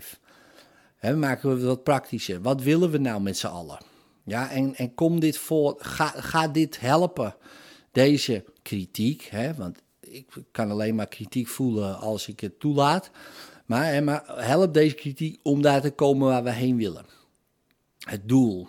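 No faults are audible anywhere in this speech recording.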